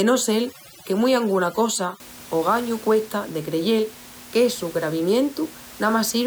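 From 0.0 to 2.0 s, just before "ogañu cuesta de creyel", overdone noise removal leaves twinkling specks over a gated background, unlike steady room noise.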